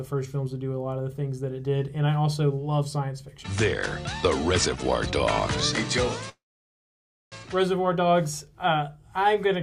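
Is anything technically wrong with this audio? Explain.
Yes, there is one fault. At 6.29 to 7.34 s there is a call audio freeze: packets likely stalled and drained the jitter buffer, so a short fading tail gives way to 0.94 s of silence. The sound then resumes where it stopped, with nothing lost but 1.02 s late.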